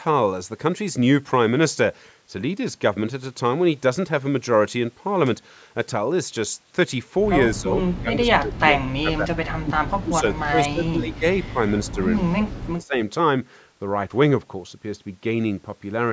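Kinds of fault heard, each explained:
Speech suppressed in double talk: from about 7.6 to 13 s the speech dips or drops out in bursts, by up to about 30 dB, likely an echo canceller muting this talker while the far side also spoke. Waveform: sudden envelope notches; spectrogram: vertical gaps.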